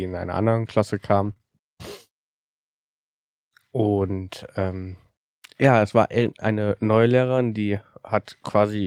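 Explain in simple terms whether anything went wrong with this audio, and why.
Yes, the connection dropped bits of this speech twice in a way the system could patch from backup copies. That is a lost packet rebuilt from error correction, at 1.25 to 1.31 s and again at 6.21 to 6.27 s. Each time about 40 ms went missing, which fits two packets, but the following packets carried cheap, lower-quality copies. The player used those, so nothing goes silent. Instead, those moments sound rougher and noisier.

Right after the first patch, more audio arrived too late and had no backup: short concealed packet loss, at 1.33 to 1.38 s and 1.38 to 1.41 s, about 20 ms each. The receiver guessed what belonged there by stretching the sound that came just before, then blended back into the real signal. This makes roughly 1.33 to 1.41 s sound briefly smeared or wobbly, and a short sound could slip away.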